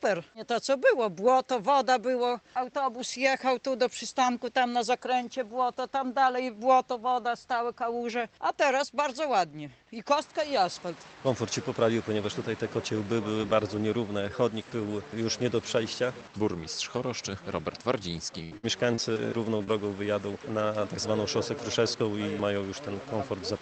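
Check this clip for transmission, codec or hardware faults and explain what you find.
Two transmission faults appear near the end, both from lost packets on a call path whose audio stops at about 8 kHz. That cutoff fits a wideband Opus setting.

Repeated packet loss (robotic sound) runs from 18.43 to 19.17 s. Four gaps, the longest 79 ms, were each patched by extending the previous sound, covering about a quarter of that stretch. It sounds choppy, with pieces missing. A spectrogram shows smeared, frozen-looking harmonic blocks between normal texture.

Short concealed packet loss occurs twice, at 19.57 to 19.61 s (about 20 ms) and 19.63 to 19.69 s (about 40 ms). Each hole was filled by continuing the preceding sound, then blended back. It sounds like a brief smear or wobble.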